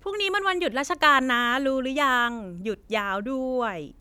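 No technical faults can be heard anywhere in this recording.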